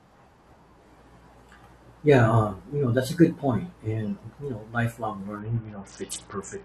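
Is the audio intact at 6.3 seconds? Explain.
No, 6.3 s falls inside a Bluetooth SBC bit pool drop running from 5.39 s, just after "and you know lifelong", to the end. The treble dulls and gritty noise creeps in, which fits the bit pool falling from 31 to around 7, roughly 61 kbps, starving the upper sub-bands.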